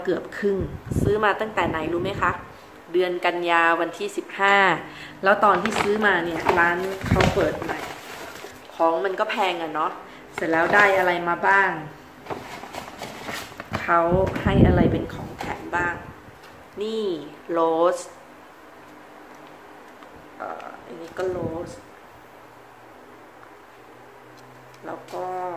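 Nothing here catches the ear as a technical fault at any point, so there's nothing to flag in this one.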